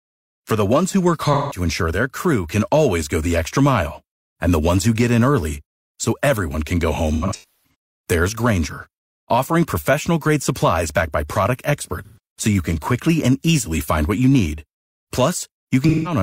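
Smeared, phasey patches of sound interrupt the speech at 1.33 to 1.61 s (after "the ones who work"), 7.13 to 7.74 s (after "everyone can go home"), 12.05 to 12.18 s (after "supplies backed by product") and 15.89 to 16.16 s. This is AAC frame loss with concealment: the decoder fills each gap from the last good spectrum. The 7.13 s gap is scattered, its longest run about a third of a second.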